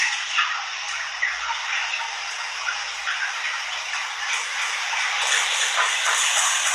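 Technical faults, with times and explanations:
throughout, HE-AAC compression: likely a low-bitrate HE-AAC encode, fitting about 16 kbps, synthesises the treble from copied lower bands, so highs turn gritty and metallic, with nothing above 12.3 kHz.
4.55 s to the end, doubled audio track: a second, slower path, likely a duplicate capture, adds a copy roughly 300 ms late at about equal level. It begins abruptly, giving a dry, undecaying repeat.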